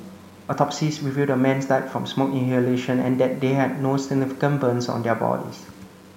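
From start to finish the speech carries a grainy, rasping distortion that tracks the sound itself rather than sitting underneath it as a steady hiss. Quiet syllables and word tails turn gritty, and the softest passages break up or drop out instead of fading smoothly. The error sits roughly 30 dB below the signal, which fits low bit depth without dither, likely 8-bit samples rounded with no added noise to decorrelate the error.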